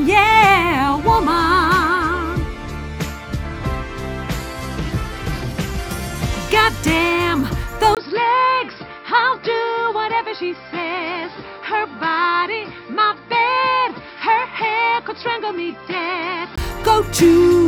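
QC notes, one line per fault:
7.95–16.58 s, input switched to a poorer device: after a quick 20 ms dropout the sound goes dull and boxy, with nothing above 5.4 kHz, about 5 dB quieter, and a faint new noise floor underneath. Likely another mic or a headset's call profile took over, and the sound clears again at 16.58 s.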